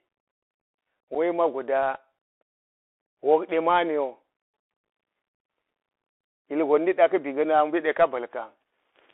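A narrow, boxy sound runs through the whole speech clip, with nothing above about 3.5 kHz or below roughly 300 Hz, scratchy s sounds, a granular hiss beneath the voice, and a roughened edge on louder high-frequency moments. This is the Bluetooth CVSD headset codec. It sends a single up-or-down bit per sample, which fits a 64 kbps link. Its adaptive step can't keep pace with fast, loud high-frequency movement, and the constant step hunting leaves that grainy hiss.

At 1.15 s the speech drops out for about 7.5 ms, a brief hole with abrupt edges, and the sound returns quieter for a moment. This is unconcealed Bluetooth headset packet loss. Roughly one voice packet between headset and phone failed to arrive, and nothing was done to smooth over the gap. Silence or an idle pattern filled it, and the CVSD decoder's step size had to rebuild afterwards.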